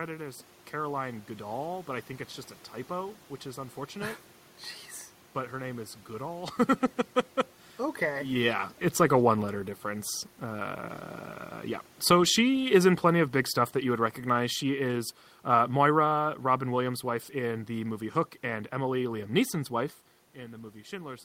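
Automatic gain falling from 12.4 to 16.93 s: the gain control judged the input too loud or its background noise too strong and eased its level down by about 6 dB, so the speech and the room noise sink together just before "wife in the movie".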